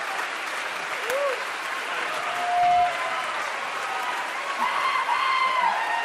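Loudspeaker feedback squeal runs from 2.08 to 3.02 s: the microphone picked up its own loudspeaker, and the loop gain passed unity at 709 Hz. That pure tone swells over roughly half a second into a squeal around 10 dB above the sound.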